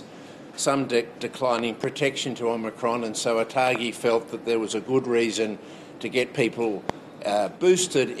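Loud pops, doubled at 1.59–1.86 s and 3.67–3.78 s, single at 6.90–6.92 s, jump about 15 dB over the sound from likely voltage spikes. Unlike dropouts, the audio continues underneath.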